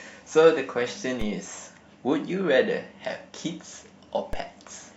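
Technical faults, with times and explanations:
1.21 s and 4.33 s, DC step: the waveform's zero line abruptly jumps by about -21 dBFS, as if an offset were switched into the input, then drains away through a 5 Hz high-pass. Each jump lands as a low thump beneath the continuing speech.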